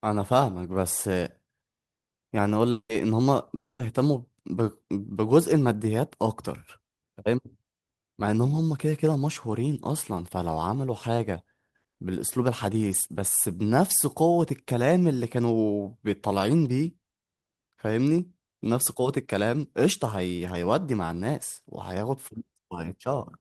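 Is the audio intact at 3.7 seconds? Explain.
No. A long network dropout, likely from lost packets, runs from 3.55 to 3.82 s: a fading buzz drops to a flat, blank gap on waveform and spectrogram.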